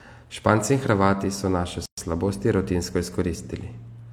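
At 1.86 s the speech drops out into silence for about 120 ms, resuming at 1.98 s with the sound carrying on exactly where it broke off; both edges are smeared. This is a gap at a join of encoded pieces: the audio was encoded in separate chunks, here about 2 s long, and joined untrimmed, so one chunk's padded final frame and the next chunk's start-up delay both remain as dead air.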